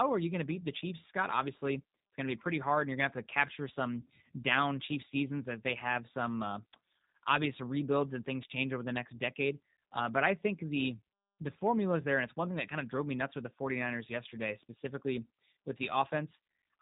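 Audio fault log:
Throughout, G.729 codec: The speech is band-limited, with nothing above about 3.8 kHz, so it sounds thin and boxy. Its character is plainly rough and slightly synthetic. The codec does not send the waveform itself. It rebuilds each short frame from a vocal tract filter, a pitch predictor and a few coded pulses. That leaves a buzzy, artificial texture on the speech. The damage fits a G.729A encoding at 8 kbit/s.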